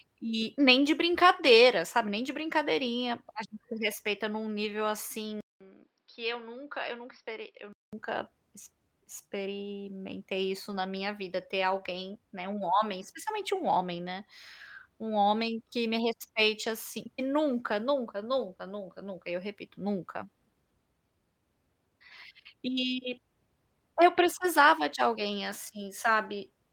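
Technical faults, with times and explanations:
4.65–4.71 s, 10.71–10.81 s and 11.91–11.97 s: lost packet rebuilt from error correction. Right after "se respeita em um", after "ex experimentei isso", and after "minha vida ter", short stretches of about 40, 60 and 40 ms turn grainy and hissy with no gap, which fits runs of two, three and two 20 ms packets. Each was replaced by the low-bitrate backup copy carried in the following packet. On a spectrogram these appear as narrow smeared patches. The waveform stays continuous.
5.41–7.93 s: input switched to a poorer device. The audio drops out for about 200 ms, then returns a few dB quieter and duller, with a faint new noise floor roughly 45 dB below the signal. It opens up again at 7.93 s. The likely cause is the system swapping to a narrower-band microphone or headset profile. On a spectrogram, everything above 5.6 kHz is cut off flat across the span, and a blank strip marks the switch.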